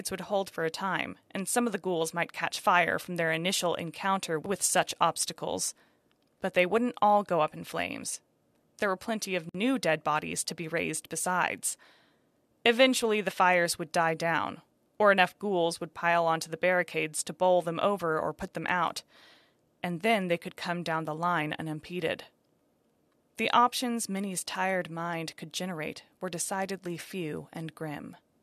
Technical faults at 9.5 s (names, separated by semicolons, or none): gap at a join of encoded pieces